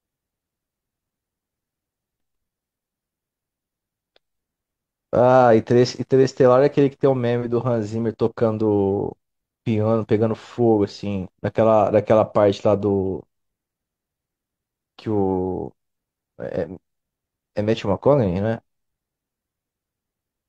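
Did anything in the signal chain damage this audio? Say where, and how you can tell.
No, nothing in the signal chain damaged this audio.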